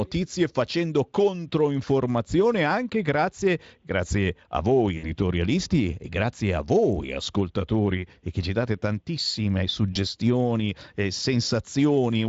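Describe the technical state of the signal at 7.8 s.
At 7.8 s the speech is intact, with no dropout, glitch or other fault at that moment.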